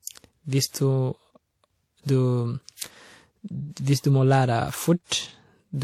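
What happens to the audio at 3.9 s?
At 3.9 s the speech carries the same transcoding between lossy codecs heard throughout: smeared, swirly artefacts from two codecs layered together, likely an older WMA-style encode re-encoded to low-rate HE-AAC. A spectrogram shows a hard ceiling with nothing above 18.4 kHz.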